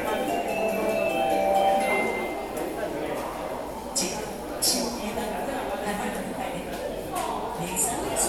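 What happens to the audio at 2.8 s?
Nothing goes wrong at 2.8 s; the audio plays through that moment intact, with no dropout, click, distortion or other fault.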